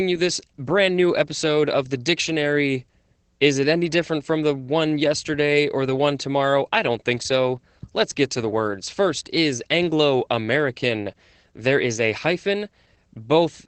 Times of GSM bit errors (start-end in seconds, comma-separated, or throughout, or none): none